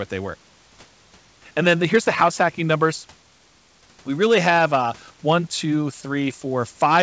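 No technical faults can be heard in the speech, which carries the band limit of a G.722 call path with nothing above 8 kHz, and the room noise sits about 38 dB below it.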